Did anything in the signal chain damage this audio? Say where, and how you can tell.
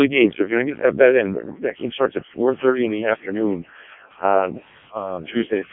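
Yes. The Codec 2 vocoder stage damages the speech throughout. Nothing survives above 3.7 kHz, and the robotic, buzzy heavy damage suggests its lowest 0.7 kbit/s mode. Only pitch, voicing, energy and a spectral envelope are sent, and the decoder rebuilds speech from sine waves.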